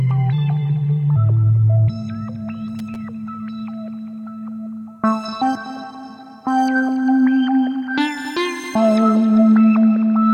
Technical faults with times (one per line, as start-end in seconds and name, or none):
2.79-2.96 loose connector crackle
9.76-10.34 Bluetooth SBC bit pool drop